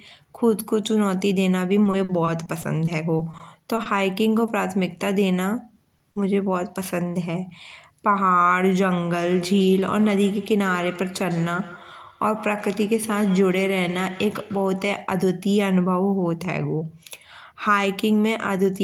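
From 1.83 to 3.88 s, repeated packet loss (robotic sound) leaves twelve short holes, the longest 50 ms, each patched by extending prior sound; the spectrogram shows smeared, striped harmonics. Short concealed packet loss follows at 4.46–4.50, 5.84–5.88, 5.98–6.02 and 6.12–6.18 s, brief smears where missing audio was synthesised, visible as blurred vertical slivers. From 9.08 to 15.17 s, feedback echo between two devices returns the speech roughly every 150 ms, at least about 17 dB down, drawn as faint, evenly spaced copies trailing each burst.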